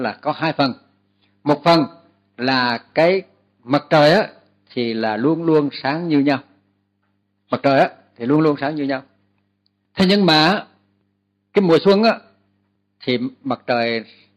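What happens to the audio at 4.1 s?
At 4.1 s the audio carries clock slip clicks, a fast run of tiny ticks about every 0.05 s that merges into a soft rattle from 0.11 s to 14.32 s. Likely cause: two unsynchronised clocks, around 400 ppm apart, each slip dropping or repeating one sample.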